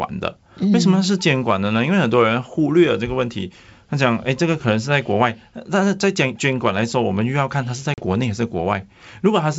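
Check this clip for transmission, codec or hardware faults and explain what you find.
One transmission fault is audible: a short dropout near the end of the speech, through the G.722 wideband path at 64 kbit/s.

Packet loss on an ADPCM call, 7.94 to 8.02 s: about 40 ms of audio, roughly two packets, vanishes into hard-edged silence. ADPCM decodes each sample from the previous state, so the lost packets leave the receiver's predictor and step size mismatched with the sender's. Speech resumes slightly distorted before the states realign. A waveform shows a flat gap with abrupt edges. A spectrogram shows a blank vertical band.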